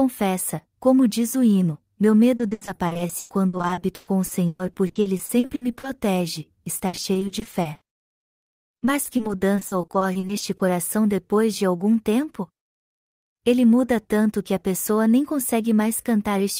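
From 2.37 to 5.85 s and again from 6.77 to 10.61 s, repeated packet loss gives the speech a choppy, robotic sound. Dozens of dropouts, up to 120 ms and then 60 ms long, are patched by stretching the previous sound across about a third and a quarter of each span. On a spectrogram these patches appear as smeared, repeated blocks. The waveform looks stuttered and uneven.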